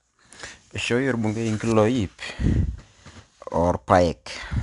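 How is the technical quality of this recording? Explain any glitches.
The recording carries clearly audible codec damage across the whole speech clip. Throughout, 4-bit ADPCM compression encodes each sample as a coarse 4-bit step from a predicted value. The quantisation error tracks the signal level, giving gritty hiss on louder passages. Nothing sits above 10.6 kHz, which fits a sample rate near 22 kHz.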